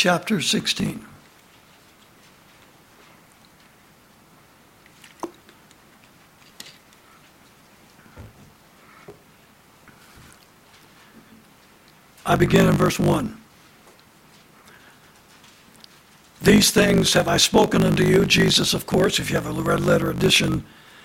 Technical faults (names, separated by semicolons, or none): block size mismatch (truncated)